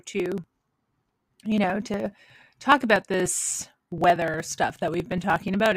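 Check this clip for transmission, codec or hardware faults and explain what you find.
There's one fault here: periodic USB or driver dropouts from 0.08 s to 5.72 s. Something stalls the USB bus or driver every 60 ms, and roughly 4 ms of audio gets skipped each time. That gives a steady string of ticks riding on the speech, around a hundred of them.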